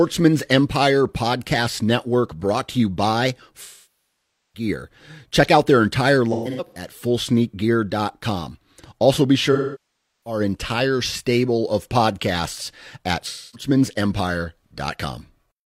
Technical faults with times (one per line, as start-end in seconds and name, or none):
3.62-4.69 AAC frame loss with concealment
6.32-6.86 AAC frame loss with concealment
9.52-10.40 AAC frame loss with concealment
13.26-13.68 AAC frame loss with concealment